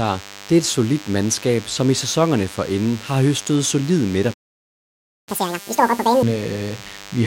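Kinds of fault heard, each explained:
DECT cordless phone buzz: A thin, steady buzz at 100 Hz with many harmonics runs under the speech for the whole clip. It sits about 20 dB below the speech. A nearby DECT handset or base sends a radio burst every 10 ms, and the audio circuit rectifies it.
Playback stall: Right after "inden har høstet solide", the speech cuts to silence at 4.33 s. It stays silent for about 0.94 s, until 5.29 s. The player likely ran short of data or had its thread blocked, so output stopped until it recovered.
Catch-up at higher speed: From 5.29 s to 6.23 s the speech plays at double speed. The pitch jumps by roughly ten semitones, giving a chipmunk quality. The player is resampling its backlog to regain the time lost in the stall, then returns to normal.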